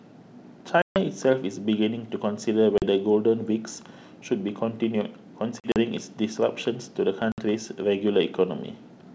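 Packet loss on an ADPCM call cuts hard silent holes at 0.82–0.98 s (140 ms), 2.78–2.83 s (40 ms), 5.60–5.76 s (80 ms in short gaps) and 7.32–7.41 s (60 ms). The decoder's predictor loses step, so speech returns with brief distortion.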